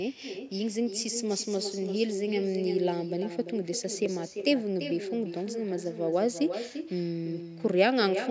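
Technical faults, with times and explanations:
Throughout: echo with no canceller. A quieter, thinner copy of the speech returns roughly a third of a second later, about 8 dB down, from the far loudspeaker reaching its microphone.
4.06 s: dropped buffer (overrun). A brief jump where the speech skips ahead by a few milliseconds, likely from samples overwritten before the program collected them.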